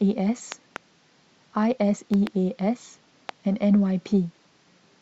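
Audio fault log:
0.52–0.78 s, 2.14–2.29 s and 3.29–3.31 s: loud pop. The first two are double pops, each a pair of sharp thumps, and the last is a single one. Each peaks about 10 dB above the speech, which carries on underneath. The cause is likely a sudden voltage step or pulse, from a plug, switch, static discharge or driver glitch, that the following circuitry shapes into a brief thump.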